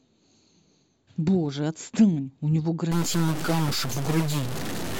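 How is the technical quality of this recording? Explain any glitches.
The speech is degraded in its second half by a stuck bit fault. From 2.92 s to the end, the sound turns harsh and buzzy, and the pauses fill with a gritty noise floor. The likely cause is one data bit held at a fixed value by a faulty line or converter, so about half the samples are displaced by that bit's weight, a step of roughly -25 dBFS. Because that bit also flips with the sign of small values, the silent stretches become noisy.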